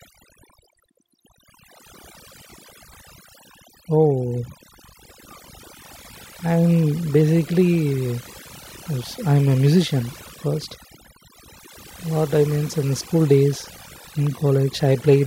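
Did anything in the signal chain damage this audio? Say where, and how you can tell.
Yes. The damage comes from overdone noise removal, a processing stage applied across the whole speech clip. The background between phrases drops and breaks up into twinkling specks. A suppressor set too hard compares each frequency band against its noise estimate and pulls matching bands far down. Quieter parts of the voice fall near that estimate and get cut along with the noise.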